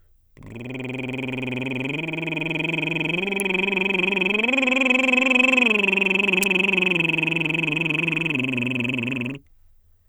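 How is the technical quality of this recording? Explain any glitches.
Two brief snaps break into the music. Electrical switching spike at 3.40 s and 6.43 s: a nearby switch, motor or static discharge likely arced into the audio line, leaving sharp clicks, the second louder.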